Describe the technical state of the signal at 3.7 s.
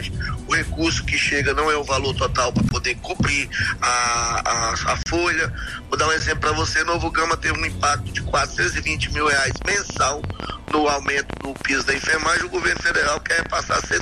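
At 3.7 s the signal is intact, with no dropout, distortion, glitch or other audible fault at that point.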